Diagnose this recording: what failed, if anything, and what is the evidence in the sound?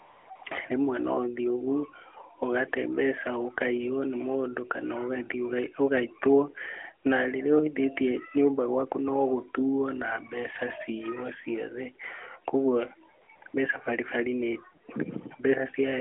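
The failure is AMR comfort noise, at the codec stage. The sound opens with about 0.3 s of smooth, steady hiss from 0.00 to 0.30 s. Short patches of it follow at 0.36 to 0.42 s and 0.44 to 0.46 s. More appear at 13.22 to 13.28 s, 13.36 to 13.42 s, 13.44 to 13.46 s and 13.48 to 13.54 s. Each time, the sender's voice detector judged the line silent and stopped sending speech frames. The receiver then generated synthetic noise from a rough level and spectrum estimate, so the real background drops out and returns. The narrowband speech band, which points to AMR-NB at about 12.2 kbps, carries the sound on either side.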